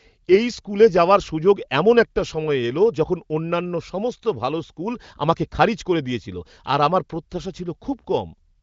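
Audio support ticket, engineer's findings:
No faults found in audio.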